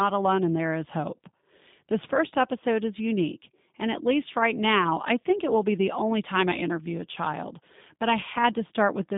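Speech, passed through a G.729 codec for its whole length. The sound is confined to a narrow telephone band, roughly 150 Hz to 3.7 kHz. There is no air or sibilance above that. The codec damage is plainly audible. Voicing sounds rough and slightly synthetic. That comes from rebuilding each 10 ms frame from a vocal tract filter, a pitch predictor and a few pulses. This fits the 8 kbit/s G.729A variant.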